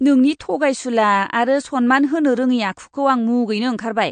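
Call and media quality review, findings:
MP3 compression, whole clip: likely a low-rate MP3 encode, damage consistent with roughly 48 kbps. Encoder short of bits, treble cut so nothing survives above 9.1 kHz, weak spectral lines dropped and reinstated frame to frame. Result: dull, band-limited speech with a watery, swirling texture and metallic edges on sibilants.

Pre-echo, 0.39 s, just before "थगायसुला आरो": transform block straddles a sharp onset, quantisation noise sized for the loud attack spread across the quiet lead-in. Result: brief hiss about 12 ms ahead of the attack, onset softened and smeared.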